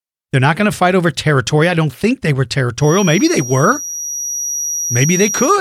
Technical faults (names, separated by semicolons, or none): feedback whistle